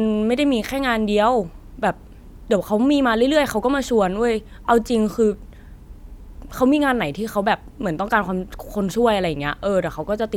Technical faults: none

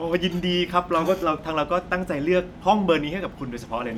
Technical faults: none

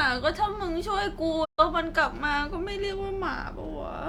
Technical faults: digital broadcast dropout

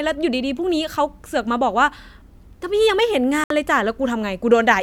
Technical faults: digital broadcast dropout

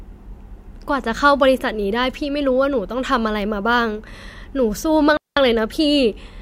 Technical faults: digital wireless dropout

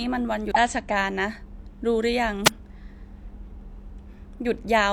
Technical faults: damaged data in a compressed stream; wireless microphone noise hit

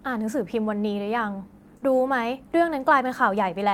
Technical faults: short concealed packet loss

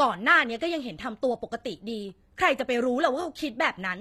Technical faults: HE-AAC compression

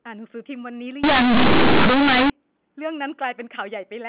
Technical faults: companded audio read as linear

